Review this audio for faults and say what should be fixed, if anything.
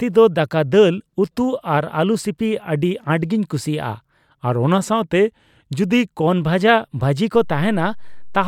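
From 4.24 to 6.27 s, the speech slows by about 5.7% and drops about 101 cents, roughly a semitone. Speed and pitch fall together, then snap back. This is likely a drift correction step, where clock-matching software abruptly changed the playback rate to rebalance its buffer. To prevent it, use a resampler that corrects drift gradually in tiny increments.

At 7.35 s, a DC step gives a low thump as the waveform's zero line jumps. The offset holds until the clip ends at 8.47 s, while the speech continues unchanged. To prevent it, apply a high-pass filter and avoid switching offset-carrying inputs mid-recording.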